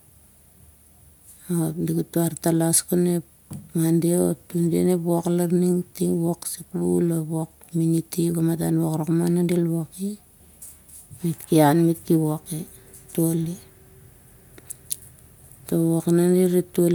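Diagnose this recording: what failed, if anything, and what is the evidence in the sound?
Listening closely, nothing in the sound points to a failure at any stage between capture and playback.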